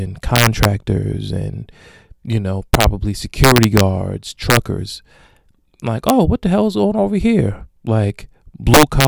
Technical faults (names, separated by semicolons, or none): integer overflow